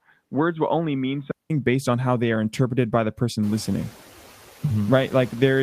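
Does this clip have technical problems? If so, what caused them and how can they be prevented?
Yes. Throughout the clip, the background dips between phrases and swells back under the speech. These are noise suppressor artifacts: the suppressor pulls the bands it judges to be steady noise down by about 6 dB, frame by frame. Gentler suppression settings, or reducing noise at the microphone instead, would prevent this.

From 0.0 to 1.5 s the speech sounds dull, boxy and somewhat quieter. A 188 ms silence follows, and then "based on how they" comes through fuller. This is likely the input switched to a poorer device, a narrower-band microphone or headset profile, before returning. Locking the recording input to one device before starting would prevent it.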